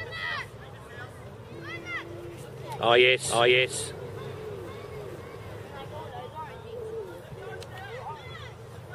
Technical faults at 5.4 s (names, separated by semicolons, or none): doubled audio track